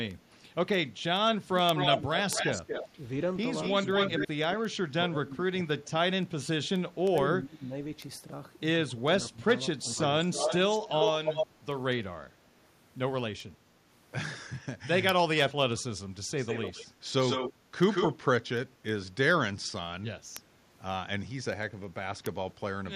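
Speech carries steady word clock ticks from 0.11 s to 22.9 s: sharp clicks of uneven strength, about ten per second, roughly 200 in all. They are consistent with a receiver whose clock runs around 200 ppm off the sender's and drops or repeats one sample at each slip, seen as thin vertical lines evenly spaced across the whole spectrogram. An echo leak appears at 1.76–2.88 s and 3.63–4.28 s (delay 232 ms), at 10.03–11.47 s (297 ms), and at 16.37–18.16 s (150 ms). The copy sits at about the same level as the speech, and at about 5 dB down in the last stretch. It is likely an echo canceller letting loudspeaker pickup through, and it shows as a delayed, smeared duplicate of the speech contours in the spectrogram. Speech is suppressed in double talk at 4.18–6.04 s, dipping by up to about 25 dB over around a second and a half, and at 6.98–7.74 s and 8.89–9.98 s, each dipping by about 20 dB for about half a second. 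This is likely an echo canceller ducking the talker while the far side speaks, visible as waveform envelope notches and faded upper harmonics.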